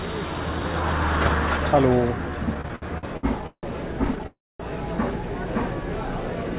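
Repeated stalls (stutter) run from 2.54 to 3.65 s. Packets kept arriving late or slower than playback, so the jitter buffer emptied nine times and the receiver stretched the last sound to cover each wait. About 408 ms is filled that way, over a third of the span, with the longest hold at 162 ms. Nothing is dropped, but the sound drags and stumbles. A second, lighter stutter follows from 4.05 to 4.27 s: six brief holds totalling 58 ms, none longer than 14 ms.

A call audio freeze comes straight after, from 4.27 to 4.61 s. The sound stops moving forward and the last fragment is carried on for about 328 ms, trailing off into roughly 240 ms of silence before the audio resumes where it left off. This is likely packets held up in transit, draining the jitter buffer, so a gap is inserted rather than anything being lost. Throughout, the audio has nothing above 4 kHz, which fits a narrowband G.711 call codec at 64 kbps.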